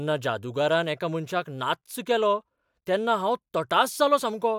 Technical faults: none

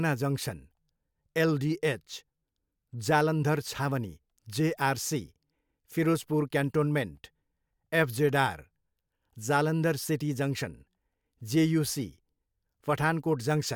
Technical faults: none

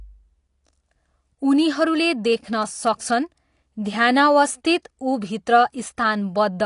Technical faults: AAC compression; pre-echo

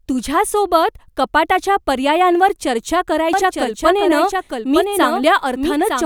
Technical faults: doubled audio track

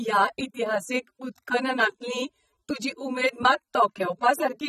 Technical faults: AAC compression

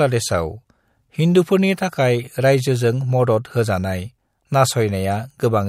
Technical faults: none

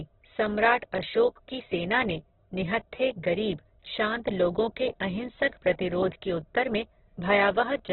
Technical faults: Opus compression

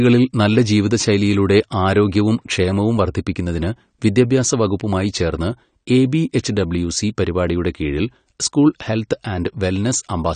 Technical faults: AAC compression

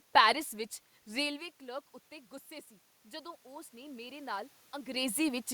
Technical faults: automatic gain rising

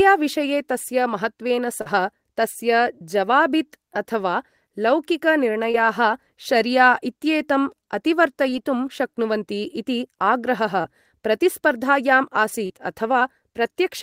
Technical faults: short concealed packet loss

